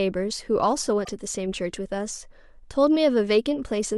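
At 1.01 s the speech is interrupted by damaged data in a compressed stream, lasting until about 1.09 s. For roughly 80 ms the decoder is fed corrupted bytes, so it misinterprets the frames in that stretch, loses its frame alignment and has to hunt for the next valid header before normal decoding resumes. The result is a brief chirp, squawk, click or short hole that replaces the speech for that short interval before the signal returns.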